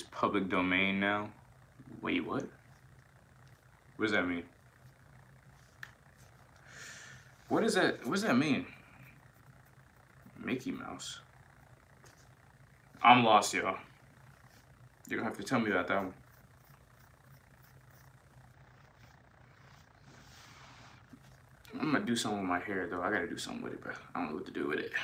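From 18.54 to 21.10 s, one channel runs a fraction of a millisecond behind the other, about 0.05 ms, which fits a delay of only a couple of samples, and the two are then summed to mono. This channel delay produces comb filtering: content common to both channels cancels where the offset equals half a cycle, placing the first notch at roughly 10 kHz. The top end sounds dulled, losing air and sparkle for those few seconds.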